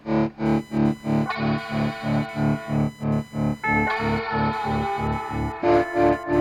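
Processor or peripheral load is disturbing the audio ground, so from 0.46 s to the end a computer activity noise buzzes at around 1 kHz, roughly 25 dB under the music.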